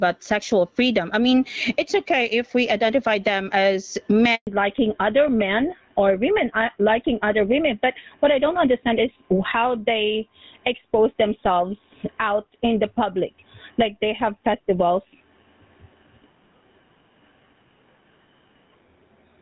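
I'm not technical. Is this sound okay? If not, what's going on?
No. Three things go wrong.

Throughout, there is gain pumping: loud and soft parts end up closer in level, and the sound is squashed. The likely cause is a microphone level set far too high, with automatic limiting pulling it back down.

At 4.35 s, right after "we identify them as", a handover gap occurs. The voice drops into complete silence for about 0.12 s while the phone switches networks. It is a clean gap, not crackle or distortion.

From 4.47 s to the end, there is a fallback to narrowband. The call leaves HD Voice for an older standard, so everything above 4 kHz disappears. Unlike the brief gap, this lasting change leaves the voice duller and more muffled for the rest of the clip.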